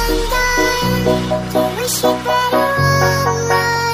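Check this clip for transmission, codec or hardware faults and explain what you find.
Nothing in this one stands out as a transmission, codec or hardware problem; it comes across as it should, with no dropouts, glitches or odd artefacts to flag.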